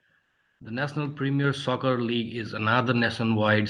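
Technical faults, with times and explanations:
0.25–0.55 s, comfort noise in place of the background: transmission likely paused, so the receiver filled 300 ms with flat synthetic noise, about 13 dB off the real background level.
1.44 s and 2.46 s, microphone volume stepped up: the call software raised the input gain abruptly, by about 3 dB then about 4 dB, lifting voice and background together.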